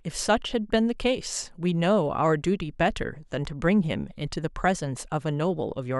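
A speech recording with nothing technically wrong with it.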